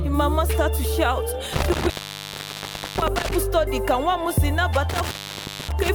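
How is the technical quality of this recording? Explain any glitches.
The recording has two dropouts from an intermittent contact, from 1.53 to 3.31 s and from 4.89 to 5.89 s. A loose cable or plug briefly loses its connection, so the signal path opens. The sound cuts out for about 1.06 s in the first stretch and about 0.58 s in the second. Crackle marks the moments where the contact breaks and remakes, and faint hiss remains while the line hangs open.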